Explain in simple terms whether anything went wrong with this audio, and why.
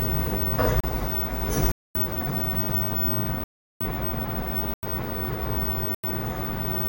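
The sound cuts out five times, each a block of digital silence: at 0.80 s (about 33 ms), 1.72 to 1.95 s, 3.44 to 3.81 s, 4.74 to 4.83 s and 5.94 to 6.04 s. The audio briefly went silent, most likely because the program didn't deliver the next chunk in time. Some gap lengths fit whole 4096-sample buffers. Unlike a fade or a quiet moment, each gap starts and stops abruptly.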